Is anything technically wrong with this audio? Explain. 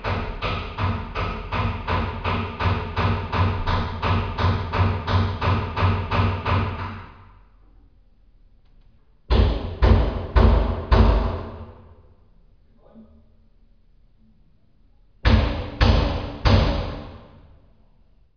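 No, no technical problems can be heard here.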